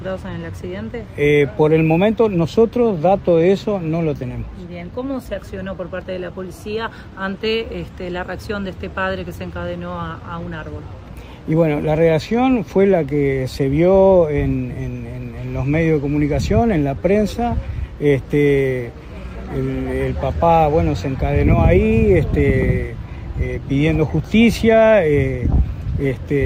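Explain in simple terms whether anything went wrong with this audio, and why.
Nothing went wrong with this audio that a listener can hear. There are no sudden interruptions, jumps or strange noises anywhere in the recording.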